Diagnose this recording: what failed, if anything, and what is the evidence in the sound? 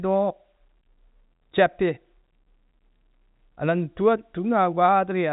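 Nothing in the signal points to a failure at any stage: the speech arrives through G.711 telephone coding, with its content ending at about 3.8 kHz as that telephone band dictates, and the chain is working as intended.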